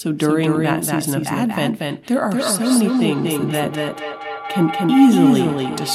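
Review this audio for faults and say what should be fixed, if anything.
A second, slower capture path is likely mixing the speech in twice, so a full-band copy about 5 dB quieter trails roughly a fifth of a second behind throughout, giving a doubled audio track. Route each source through only one capture path and remove the duplicate feed.

From 2.4 s to the end, a microphone-to-loudspeaker loop between two devices gains level each trip, building a feedback howl near 700 Hz that pulses about every fifth of a second and peaks about 9 dB below the speech. Keep only one device in the room unmuted on the call, or use headphones.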